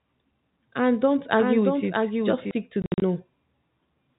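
From 1.37 to 2.51 s, just before "stick to", there is a doubled audio track, most likely because the speech was captured a second time through a slower path and mixed back in. A full-band copy trails the original by roughly 0.7 s at about 5 dB lower, so the speech overlaps itself. The copy has no reverberant tail or room colouring, and it starts and stops with hard edges.

From 2.82 to 3.02 s, right after "stick to", packet loss filled with silence chops the speech. Lost packets were replaced with digital silence, producing about 140 ms of gaps scattered across 200 ms. The longest hole lasts 60 ms. The gap lengths fit 20 ms packets. Each dropout begins and ends abruptly, so the stretch sounds stuttered. All of this sits within the telephone band of the G.711 coding, which passes nothing above 4 kHz.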